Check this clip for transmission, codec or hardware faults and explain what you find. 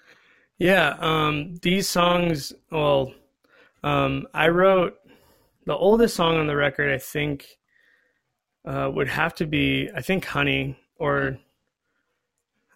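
One processing fault is present, running through the whole speech recording: overlap-add ripple. The frames were windowed and rejoined with an overlap that does not sum to a steady gain, so the level dips about 6 dB once per frame, at around 200 Hz. It sounds like a metallic buzz with extra tones around the voice. On a waveform the envelope shows regular scalloping, and a spectrogram shows fine evenly spaced vertical striations or sidebands.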